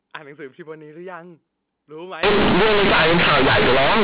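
From 2.23 s to the end, the speech falls into companded audio read as linear: the A-law bytes are played as raw 8-bit samples without expansion, so quiet stretches swing as hard as loud ones. It's harsh, loud buzzing distortion with heavy noise in the pauses, in place of the band-limited telephone sound heard before it.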